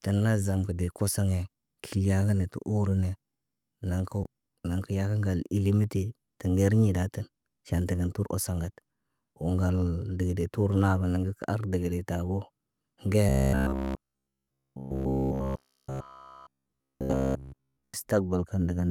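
From 13.29 s to 17.94 s the speech turns into robotic sound from repeated short buffers, a rigid metallic buzz at 66.8 Hz that still roughly follows the words. It's likely a starved stream, with roughly 15 ms chunks repeated throughout, showing as identical repeating waveform cycles and evenly spaced horizontal harmonics on a spectrogram.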